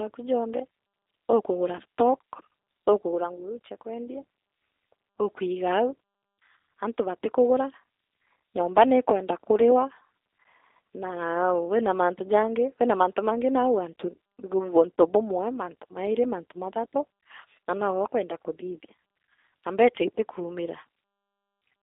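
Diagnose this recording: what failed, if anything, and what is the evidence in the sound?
The codec stage is at fault throughout: this speech has the slightly rough, synthetic texture of G.729, with nothing heard above about 3.7 kHz and little below 300 Hz. The damage is plainly audible. The roughness arises because the decoder rebuilds each 10 ms frame from a vocal tract filter, a pitch predictor and a few pulses, which points to an 8 kbit/s G.729A link. Simple band-limiting alone would narrow the sound without this roughness.

The network stage fails briefly at 14.99 s, where VoIP packet loss is concealed by the speech codec. A gap of about 20 ms, which fits two lost 10 ms frames, is filled by the decoder repeating its last pitch and filter at falling gain. That gives a short buzzy tone or coloured noise that fades, rather than silence or a click. Because each frame builds on the one before, the speech stays weak or distorted for a moment after the packets return, unlike a clean dropout.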